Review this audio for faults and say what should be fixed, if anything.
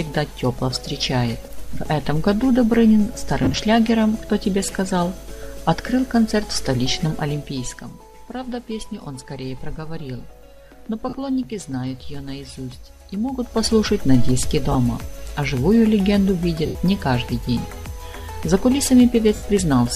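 Lost LE Audio frames show up five times: 3.44 to 3.54 s, 11.09 to 11.13 s, 14.72 to 14.75 s, 16.66 to 16.75 s, and 19.35 to 19.42 s. Each gap lasts 30 to 90 ms. The first is broken into short dropouts scattered over about 100 ms, the longest around 30 ms. In every gap the decoder keeps replaying the last spectrum with scrambled phase, so the sound smears into a brief noisy wash instead of cutting out. The gap lengths fit 10 ms frames. Giving the link more retransmission headroom, or moving it away from interference, should stop these.

Zipper noise sits between 7.11 and 7.96 s. The level drops by about 10 dB in small steps, roughly a hundred a second, with no smoothing between them. Each jump leaves a small click, and together they form a buzzy ticking on the sound while the fade runs. Interpolating the gain per sample, or running it through a short ramp, would get rid of it.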